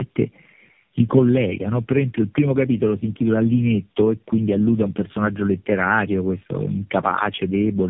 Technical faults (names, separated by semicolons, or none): tandem speech coding